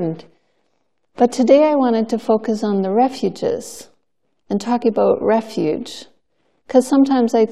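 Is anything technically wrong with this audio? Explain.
Yes. At 2.24 s there are dropped samples: the stream likely lost a tiny run of samples, well under a millisecond, so the waveform leaps straight to a later value. That discontinuity is heard as a single sharp click, with nothing audibly missing.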